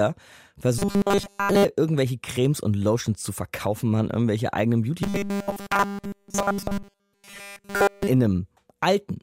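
From 0.79 to 1.65 s, and from 5.03 to 8.07 s after "verkaufen machen irgendwelche eigenen", the speech turns into a robotic sound from repeated short buffers. It becomes a rigid, metallic 200 Hz buzz throughout. Each 5 ms chunk is likely being replayed while the real audio is skipped.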